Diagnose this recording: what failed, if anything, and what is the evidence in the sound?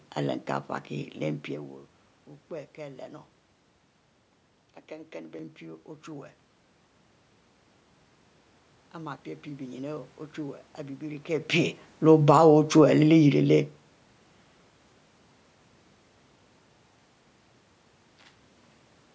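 Between 3.83 and 5.39 s the speech abruptly turns duller and boxy, then opens up again, with no gap at either transition and no obvious level jump. On a spectrogram the top edge drops from the 8 kHz ceiling of the call's own high-pass/low-pass chain to nothing above 6.9 kHz, and a faint new noise floor appears roughly 50 dB under the speech. This points to the driver or device-selection stage, likely an input switched to a poorer device for that stretch.

From 11.99 to 13.94 s the level sinks by about 5 dB, speech and room background together, which separates it from the talker moving near 11.0 s, where only the voice changed. On the waveform the envelope tapers gradually rather than stepping down. This is automatic gain falling in the call processing: the gain control judged the input too loud, or its background noise too strong, and eased its gain down over nearly two seconds.

Inside that decline, from 12.4 to 12.9 s, the gain briefly swells by about 4 dB before the downward trend resumes, so the background rises along with the speech. 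On the waveform this shows as a short bulge in the envelope during the taper, and on a spectrogram as a uniform brightening across all bands. This is automatic gain rising, also in call processing: the controller found the input too quiet and raised its gain.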